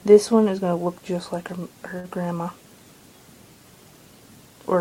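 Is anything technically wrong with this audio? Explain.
Yes. A short stall from a late packet occurs at 1.99 to 2.06 s. One packet failed to arrive on schedule, leaving the jitter buffer empty, so the receiver filled the gap by extending the preceding sound for about 44 ms. When the packet turned up, playback resumed exactly where it had paused, so nothing is lost; everything afterwards simply runs 44 ms later. Audibly, the sound hangs a fraction too long, with a faint buzzy or slightly dipped quality during the hold.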